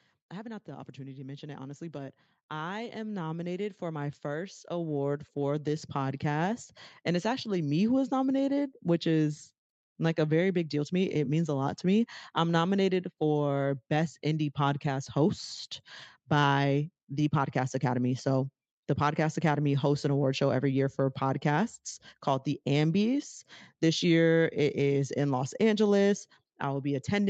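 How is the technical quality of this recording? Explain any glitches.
The recording has one clear glitch near the start, heard over speech that carries nothing above 8 kHz, consistent with a call codec's bandwidth limit. Automatic gain rising, 0.3 to 6.7 s: the gain control judged the input too quiet and raised it steadily, so voice and background swell together by about 14 dB.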